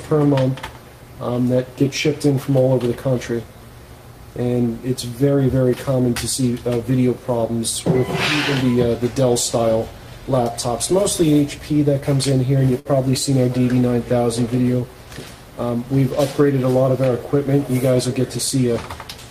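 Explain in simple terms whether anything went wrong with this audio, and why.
A burst of packet loss happens at about 12.79 to 12.88 seconds. A few chunks of the audio arrived too late or never came, so the player stretched the last sound and let it fade for around 54 ms. When the audio resumes, about 60 ms of it is simply missing.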